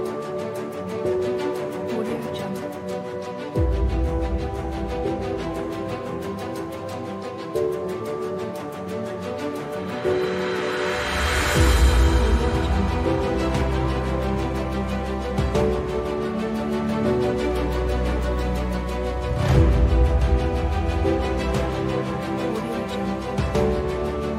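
No technical faults can be heard anywhere in the clip. Nothing in the sound calls for comment at any point.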